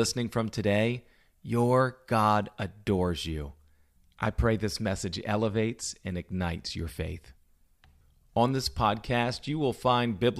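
Nothing technically wrong turns up anywhere in this bit of speech, so there's no fault to point to here.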